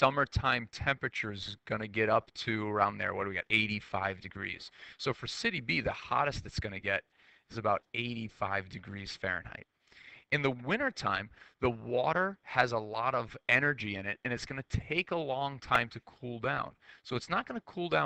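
At 15.75 s a repeated buffer stalls playback: a 1.45 ms piece loops, which fits a 64-sample buffer replayed four extra times, heard as a brief buzz. The spectrogram shows a thin vertical streak, and the waveform repeats identical short cycles.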